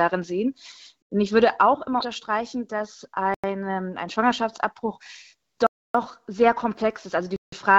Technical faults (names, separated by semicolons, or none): block of digital silence